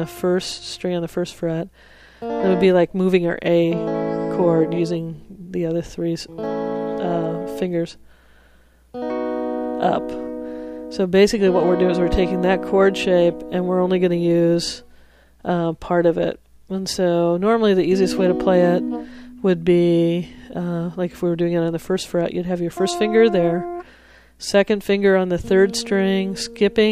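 Nothing goes wrong anywhere in this one, so there's nothing to point to and nothing to explain.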